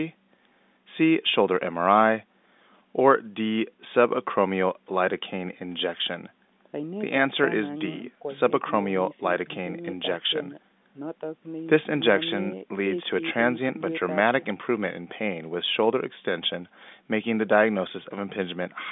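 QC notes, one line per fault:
Nothing stood out on listening to this speech clip, which carries the narrow band of an ordinary telephone line.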